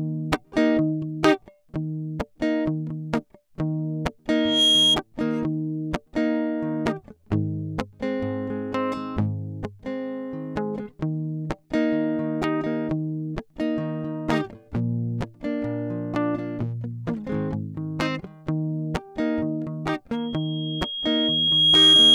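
A microphone is picking up the loudspeaker it feeds, and around 3.3 kHz the loop gain tops unity, causing loudspeaker feedback squeal in this music recording. From 4.29 to 5.00 s a tone at that pitch swells within about a third of a second to roughly 10 dB above the music. At 20.13 s it returns more slowly, building over about a second and a half, and howls through to the end of the clip.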